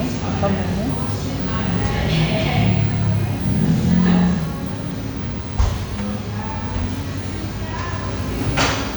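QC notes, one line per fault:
Nothing stood out on listening to this recording of sounds.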